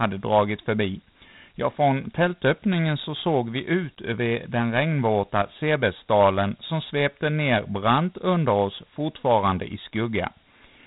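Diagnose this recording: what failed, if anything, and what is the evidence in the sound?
The failure is at the codec stage: Dialogic VOX ADPCM damage runs through the whole speech clip. Nothing is present above 3.9 kHz, so the band stops just under the 4 kHz limit of 8,000-sample-per-second coding, which fits 4-bit OKI ADPCM at 32 kbps. A gritty, plainly audible hiss rides on the speech, tracking its level. Each sample is stored as a coarse 4-bit step, and that quantisation error is heard as grit.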